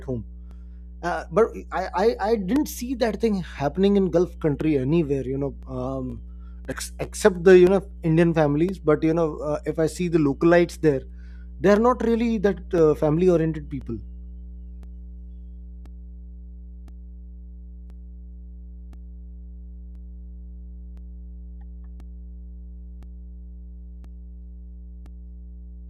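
A steady 60 Hz mains hum runs under the whole speech clip, roughly 20 dB below the voice, so a ground loop or nearby transformer is bleeding the power line in.

From 0.51 s to 25.06 s there are periodic USB or driver dropouts every 1.024 s: tiny gaps of a couple of milliseconds filled with silence, heard as regular ticks while the voice is present.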